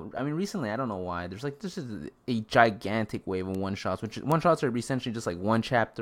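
At 3.55 s, right after "a gigantic wave of", a bit error spike gives one sharp tick peaking near about -23 dBFS. A second, louder one at 4.32 s, after "of one shots which", reaches about -11 dBFS. A single flipped bit throws a sample or two off by a power of two before it snaps back. The waveform shows an isolated needle. A spectrogram shows a thin vertical line across all frequencies, unrelated to the speech.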